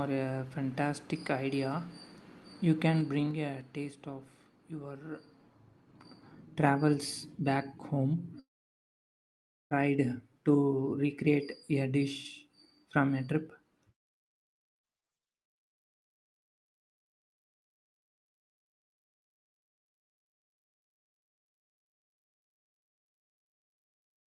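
From 2.86 to 4.01 s the speech is turned down by about 10 dB in coarse 3 dB steps instead of a smooth ramp. This is zipper noise: each unsmoothed jump puts a small click into the signal, about three a second, so a faint ticking rides on the voice while the level falls. A waveform shows a staircase envelope, and a spectrogram shows thin vertical broadband lines at each step.

At 8.39 s the audio breaks off in a long dropout, likely a network dropout, that lasts until 9.74 s. About 1.3 s of the stream never arrives. The receiver extends the last sound as a brief fading buzz, then leaves about 1.26 s of near-silence before the speech resumes with the missing part gone. On a waveform this is a flat gap after a short decaying tail. A spectrogram shows a smeared, blurred patch followed by an empty band up to the 12 kHz ceiling of the call codec.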